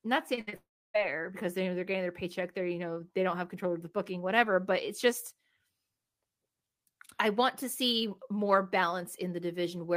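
At 0.35 s a short concealed packet loss occurs. About 20 ms of speech never reached the decoder in time. The receiver stretched the preceding sound across the hole and blended back, leaving a brief smear.

From 0.41 to 0.49 s comes a burst of packet loss. About 60 ms of speech went missing. The decoder carried the last sound forward and let it sink away, a held buzz or fading hiss. The speech then resumes further on.

A second short concealed packet loss follows at 0.49 to 0.54 s. Here about 40 ms were lost and patched over. It is heard as another quick wobble.

From 0.56 to 0.96 s the audio drops out, likely a long network dropout. Roughly 380 ms of speech never played. A brief concealed tail fades, then about 300 ms of silence remain. Speech returns further along, with that stretch gone.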